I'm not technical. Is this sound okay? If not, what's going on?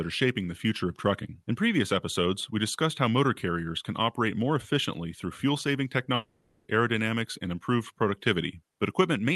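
No. At about 6.15 seconds the speech breaks up for roughly half a second, until about 6.67 seconds. The missing stretch is filled with a buzzy, hissy continuation of the last sound, which fades. When the speech comes back, that half second is simply gone. This is a long network dropout, likely caused by the connection stalling so the audio never arrived. The call software covered the gap rather than leaving silence.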